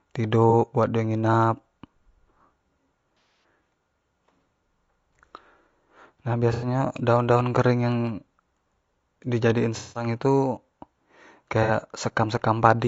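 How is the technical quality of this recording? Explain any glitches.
The recording has two problems: coding damage across the whole speech clip and five short dropouts where audio data went missing.

Low-delay AAC compression, likely AAC-ELD at a bitrate that sounds like around 32 kbps, is applied throughout. At this low bitrate the voice sounds plainly rough and grainy, with noise filling the gaps between harmonics and a thin, artificial top band.

AAC frame loss with concealment occurs at 0.50–0.54 s, 3.17–3.44 s, 6.53–6.67 s, 9.77–10.07 s and 11.63–11.70 s. The decoder rebuilt each missing stretch from the last good spectrum, so brief gaps sound smeared or phasey.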